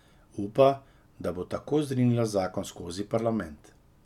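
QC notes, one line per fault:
No faults were detected in this speech recording.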